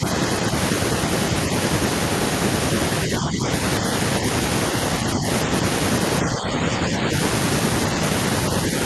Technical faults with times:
0.00-0.06 speech suppressed in double talk
3.06-3.49 speech suppressed in double talk
5.04-5.25 speech suppressed in double talk
6.22-7.10 speech suppressed in double talk

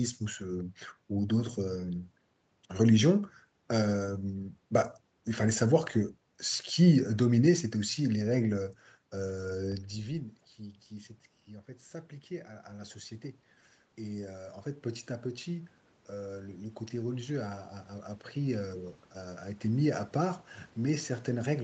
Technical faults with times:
8.56-19.92 automatic gain rising

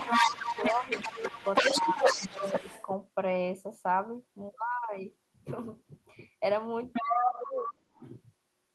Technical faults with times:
0.00-2.86 other side's voice leaking through
0.20-2.68 speech suppressed in double talk
6.93-8.10 other side's voice leaking through
7.43-8.01 speech suppressed in double talk

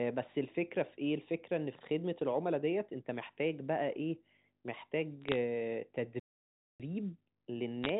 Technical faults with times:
5.22-5.36 bit errors on a digital phone line
6.20-6.80 playback stall
7.84-7.89 bit errors on a digital phone line

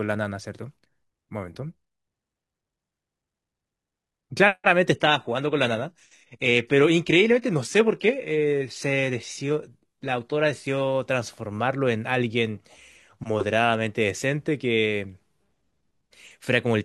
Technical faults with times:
4.92-10.92 adaptive stream at a lower bitrate

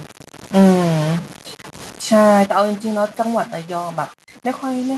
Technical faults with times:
0.00-4.97 stuck bit
0.59-0.69 microphone overload
2.46 microphone volume stepped down

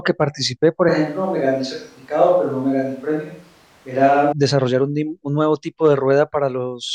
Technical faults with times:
0.89-4.32 switch to a distant microphone

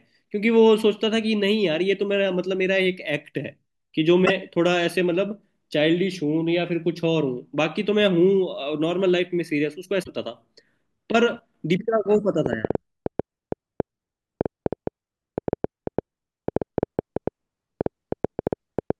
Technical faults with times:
4.25-4.30 broken MP3 bit reservoir
10.02-10.08 broken MP3 bit reservoir
11.77-11.80 broken MP3 bit reservoir
12.46-18.91 train of clicks

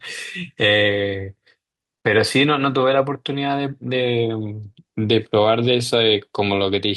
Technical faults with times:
4.73-4.77 short stall from a late packet

